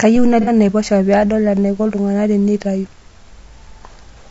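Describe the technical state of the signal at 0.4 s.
Right around there, from 0.41 to 0.50 s, there's AAC frame loss with concealment. About 60 ms of coded audio went missing, which sounds like a couple of lost frames. The decoder patched the gap from the last good spectrum, so the speech smears into a brief noisy, phasey blur. Underneath that, the whole clip has a rough, grainy texture with hiss between the harmonics and a thin, synthetic top end. That's likely low-delay AAC compression (AAC-ELD), and the plainly audible damage fits a low rate of around 32 kbps.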